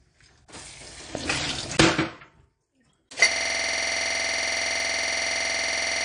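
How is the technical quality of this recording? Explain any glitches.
The technical quality is poor, with a dull, band-limited sound throughout, one sharp pop, and a stuck repeating loop that takes over the last part of the recording.

AAC compression: Across the whole clip the sound is dull and smeared, with a fizzy, warbling texture on sustained and noisy material and nothing above 10.2 kHz. The likely cause is low-bitrate AAC coding, consistent with something around 32 kbps. The encoder spends too few bits on its frequency lines, so it cuts off the top of the spectrum and quantises what remains coarsely, leaving gaps that shift from frame to frame.

Loud pop: From 1.15 to 1.17 s a single sharp pop cuts in, roughly 10 dB above the surrounding sound, while the audio carries on underneath it. It is most likely an electrical transient, such as a voltage step from a connector, switch, static discharge or driver glitch, added to the signal and then shaped by the circuitry that follows, which turns it into a brief, hard click.

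System hang loop: From 3.31 s to the end, the sound stops moving forward and becomes a rigid, machine-like stutter. The same 46.4 ms fragment repeats exactly at about 21.5 times per second, which fits a 2048-sample buffer. The computer or audio driver froze, but the sound hardware kept replaying the last contents of its ring buffer, so one block repeats until the clip ends.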